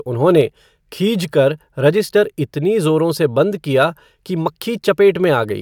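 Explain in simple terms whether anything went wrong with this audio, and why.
Nothing went wrong with this speech recording. At no point does the sound break down or change in a way that points to a technical problem.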